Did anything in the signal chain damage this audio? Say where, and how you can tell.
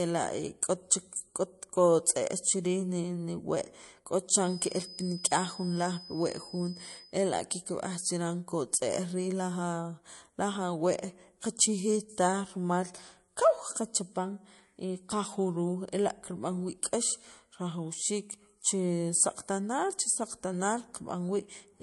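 Yes. At the codec stage, speech is watery throughout with nothing above 11.3 kHz, likely MP3 compression at a low bitrate near 48 kbps; unlike a simple low-pass, the artefacts swirl.

Acoustic feedback whistle, likely at the playback-to-microphone stage: a steady 5 kHz tone, roughly 20 dB under the speech, from 4.37 to 7.18 s. It swells and fades slowly and never grows, unlike runaway howl.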